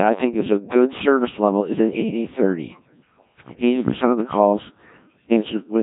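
Throughout the clip, the speech has passed through a Codec 2 vocoder, which discards the waveform and keeps only pitch, voicing, energy and a coarse spectral envelope, rebuilding the voice from sine waves. The result is heavily buzzy, robotic speech with nothing above 3.8 kHz, consistent with a 1.3 kbit/s mode.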